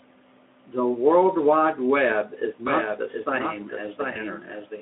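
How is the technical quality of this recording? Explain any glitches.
The recording has two faults, heard through a Speex-coded phone-band channel (roughly 250 Hz to 3.5 kHz).

From 2.67 s to the end, there is a doubled audio track. The audio was most likely captured a second time through a slower path and mixed back in. The result is a clean, full-band copy trailing about 0.7 s behind, a few decibels quieter, with no reverberant tail. It cuts in abruptly at 2.67 s.

From 4.13 to 4.17 s, there is VoIP packet loss concealed by the speech codec. A gap of about 20 ms, which fits one lost packet, was filled by the decoder extending the previous pitch and spectral shape at falling gain. This is heard as a brief buzzy or noisy, smeared fade, with the speech weak or distorted just afterwards.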